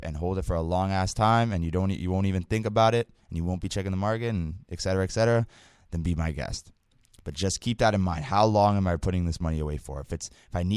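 A speech recording with no audible technical faults anywhere in the signal.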